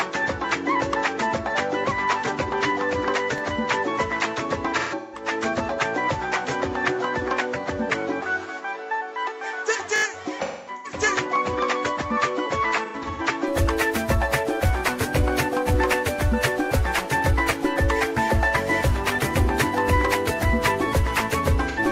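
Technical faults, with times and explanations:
0.00–13.48 s: input switched to a poorer device. The sound is dull and boxy, with nothing above 7.5 kHz, about 5 dB quieter, and a new noise floor roughly 45 dB down. It clears abruptly at 13.48 s with no gap, likely because recording returned to the better microphone. On a spectrogram the top band is empty until a hard edge at 13.48 s.
3.38–3.40 s, 8.02–8.04 s, 9.96–10.04 s: repeated buffer. A 20 ms block is replayed once at the first two points and four extra times at the third. These repeats come out as a quick stutter. The waveform shows identical 20 ms segments joined by hard steps.
4.79–5.28 s, 10.42–11.00 s, 12.85–13.21 s, 21.68–21.79 s: AAC frame loss with concealment. Missing stretches are filled in from the last good spectrum, leaving smeared, phasey, noisy patches. The second loss runs to about 300 ms. On the spectrogram these appear as blurred, frozen-looking bands.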